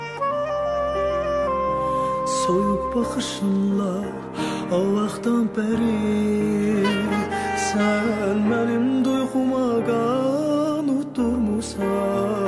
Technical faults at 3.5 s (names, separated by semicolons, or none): none